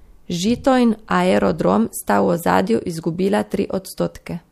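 Recorded speech with no technical faults audible anywhere in the signal.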